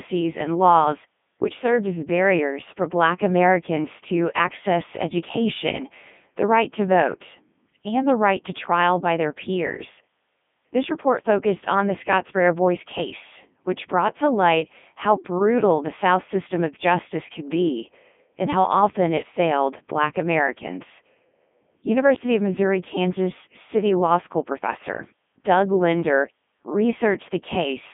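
From start to finish the speech passes through a Codec 2 vocoder, heavily damaged and consistent with the 3.2 kbit/s mode. Only pitch, voicing and envelope survive, and the voice is rebuilt from sine waves, so it sounds robotic and buzzy within 150 Hz to 3.5 kHz, with nothing above 3.6 kHz. Unlike a mere narrowband phone line, the timbre itself is synthetic.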